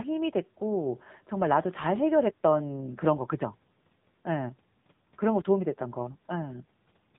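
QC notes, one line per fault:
throughout, AMR narrowband mobile codec: the speech was carried through AMR-NB, which samples at 8 kHz and rebuilds each 20 ms frame from a vocal-tract model driven by a handful of pulses. Everything above 3.8 kHz is gone, so sibilants lose their hiss and the voice sounds boxed-in and telephone-like. The plainly audible buzzy, synthetic edge on the speech fits a low mode near 8 kbps, where too few pulses describe each frame.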